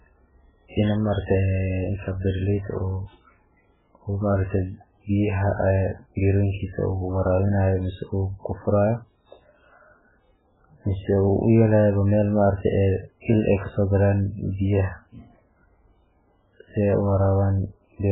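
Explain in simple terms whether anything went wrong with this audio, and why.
Yes, something went wrong for the whole clip: the speech was most likely squeezed hard by MP3 compression with far too little data to work with. To save space, the encoder threw away everything above about 3.8 kHz and dropped quieter detail that came and went from moment to moment. The result is dull, muffled speech with no crispness, plus a watery, swirling quality and blurred starts to sounds, heard all the way through.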